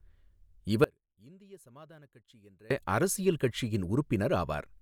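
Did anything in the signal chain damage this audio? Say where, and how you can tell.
Yes. From 0.84 s to 2.71 s the speech drops by about 28 dB and turns faint, then snaps back to full level. That's the one channel inverted signature: with one side's polarity flipped, whatever the two channels share cancels when they're folded to mono, and centred speech is almost all shared. What's left is just the small difference between the sides. The likely stage is analogue wiring, a swapped pair on one leg.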